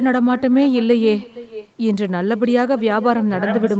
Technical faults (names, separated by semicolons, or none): echo with no canceller